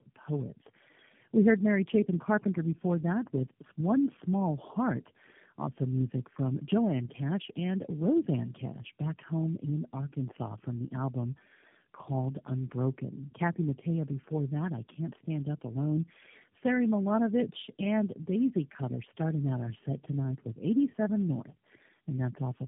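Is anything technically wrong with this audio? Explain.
Yes. Throughout, there is tandem speech coding. The call passed through about three low-rate speech codecs in succession, which fits AMR-NB and G.729-type links, each re-encoding the previous coder's damaged output. The speech sounds rough, muffled and warbly, with nothing above 3.7 kHz.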